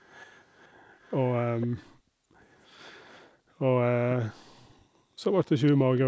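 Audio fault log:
0.0–0.68 s, 1.0–1.41 s, 1.6–1.85 s, 5.45–5.5 s: echo leak. A copy of the speech returns half a second late. It is loudest around 1.6 s, about 15 dB down, and barely there by 5.45 s. A fixed 500 ms lag, not a smeared reverb tail, points to a likely echo canceller on one side missing loudspeaker pickup.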